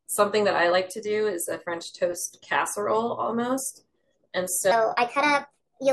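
A speech clip with a section at the wrong speed from 4.72 s to the end: it runs 1.29 times fast, raising pitch about four semitones, likely from a wrong playback clock. Unlike a pitch shift, the pace rises too.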